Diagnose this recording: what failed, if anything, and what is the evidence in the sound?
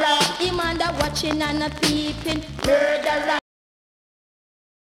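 A cut-off end at the buffer or storage stage: at 3.39 s the sound stops mid-event and drops straight to digital silence with no decay. The final buffers were never written, so the waveform ends in a vertical edge and the spectrogram goes blank for the remaining 1.4 s.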